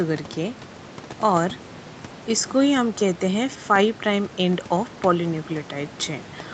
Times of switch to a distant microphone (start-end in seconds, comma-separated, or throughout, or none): none